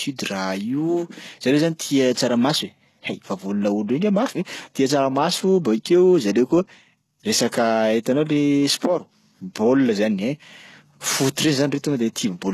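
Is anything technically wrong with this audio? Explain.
Yes. Throughout the speech there is heavy codec damage, likely from HE-AAC compression at a very low bitrate around 16 kbps. Only the lower spectrum is properly coded, and the treble is synthesised by copying lower bands upward. That makes s sounds gritty and metallic, with nothing above 12.3 kHz.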